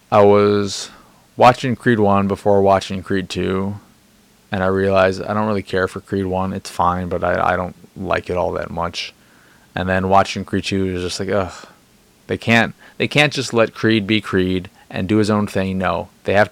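Listening through the speech recording, nothing stood out as a technical problem at any point.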